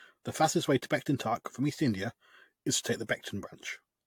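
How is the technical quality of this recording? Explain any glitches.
The recording has one fault running from start to finish: generation loss. The speech sounds swirly and hollow, with a watery smear over the consonants, blunted attacks, and nothing above 18.8 kHz. That is more damage than a single pass at a moderate bitrate would leave. The likely cause is repeated lossy coding, pointing to an AAC-LC chain at around 96 kbit/s run about five times. Each decode and re-encode quantises again on a shifted frame grid, so the noise and spectral gaps pile up.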